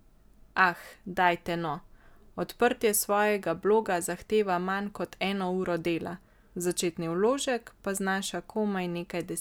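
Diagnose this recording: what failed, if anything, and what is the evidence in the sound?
Nothing failed in this speech recording, and there is no evidence in the sound of any fault.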